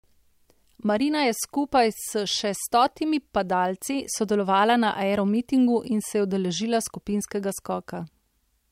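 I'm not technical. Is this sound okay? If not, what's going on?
Yes, this recording sounds fine, with nothing going wrong at any point. There are no technical problems to point out anywhere in the speech.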